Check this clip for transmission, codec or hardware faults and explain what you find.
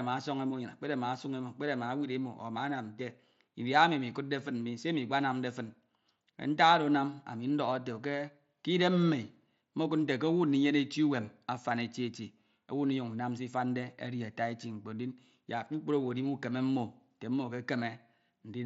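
No faults found.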